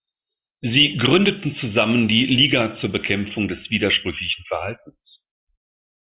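No technical faults can be heard anywhere in the recording.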